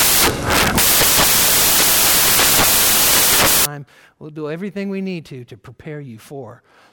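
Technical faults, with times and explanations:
0.00–3.65 s, samples built from the wrong bytes: the bytes of each sample were put together wrongly, whether through a one-byte offset, swapped byte order or a misread alignment, so the rapidly changing low-order bits ended up as the large part of each value. The speech is replaced by broadband noise. On a spectrogram, energy fills the whole frequency range with no formant structure. On the waveform it is a dense block that gives way abruptly to normal audio at 3.65 s.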